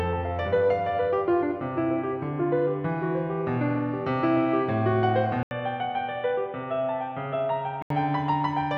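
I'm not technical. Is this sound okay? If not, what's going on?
No. At 5.43 seconds the music goes silent for a split second, then returns duller, quieter and slightly noisy. Nothing above about 3.8 kHz gets through. At 7.9 seconds it clears up again. The likely cause is an input switched to a poorer device.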